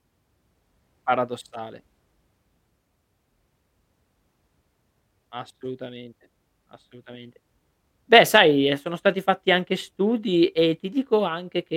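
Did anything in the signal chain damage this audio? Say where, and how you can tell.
No, no damage is audible.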